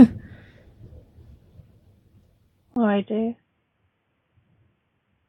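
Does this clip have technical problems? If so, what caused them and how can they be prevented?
Yes. From 2.74 s the sound turns dull and boxy, with nothing above 3.5 kHz, after a 20 ms gap. It is slightly quieter with a faint new noise floor, likely an input switched to a poorer device. Lock the recording input to one microphone and disable automatic device switching or headset call profiles.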